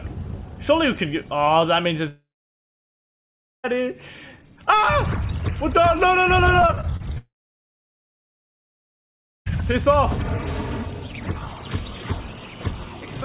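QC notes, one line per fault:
2.08–3.66 s, long network dropout: about 1.56 s of audio just goes missing. There's a brief continuation of the last sound, then roughly 1.4 s of silence before it picks up further on. The likely cause is a stall in the incoming stream, with the gap never recovered.
6.62–7.18 s, repeated packet loss (robotic sound): seven short holes, the longest 30 ms, cover about a quarter of this stretch. Each one gets patched by stretching the previous sound, so it comes out choppy and robotic, with small pieces gone.
7.18–9.48 s, long network dropout: it follows straight on from the choppy bit. About 2.28 s is lost, and roughly 2.17 s of that is plain silence after a short fill. The likely cause is the connection stalling again, and the audio resumes later without the missing part.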